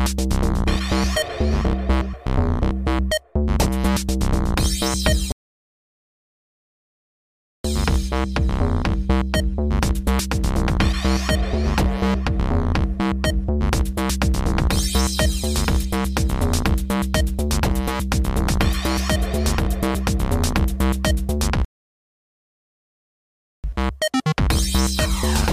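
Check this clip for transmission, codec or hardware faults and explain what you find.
There are two rebuffering stalls. At 5.32 to 7.64 s and again at 21.65 to 23.64 s, the audio drops to silence and then picks up exactly where it left off, adding about 2.3 s and 2.0 s. The player exhausted its downloaded audio and waited for more data, so nothing is skipped, only delayed.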